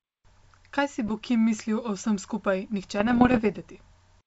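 Bit errors on an ADPCM link strike from 1.07 to 1.16 s and again from 2.97 to 3.59 s, just after "mislil o vsem skupaj". At a rate under one percent, flipped bits upset the decoder's step size and prediction, so each error rings briefly as pops and rough bursts with momentary level jumps over otherwise clean G.722 wideband sound.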